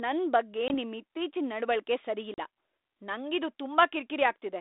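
Packet loss on an ADPCM call hits at 0.68 to 0.75 s, a 20 ms gap of roughly one packet, and again at 2.34 to 2.39 s, about two packets lost. Each hole drops to hard-edged silence. The receiver's adaptive predictor and step size lose track of the sender, so the speech comes back with some distortion before settling.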